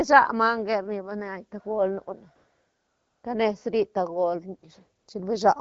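From 2.35 to 3.23 s, and again briefly from 4.99 to 5.07 s, AMR comfort noise takes over. The sending phone stopped transmitting speech frames, so the receiver substitutes a smooth, steady synthetic hiss for the real background, which switches in and out abruptly.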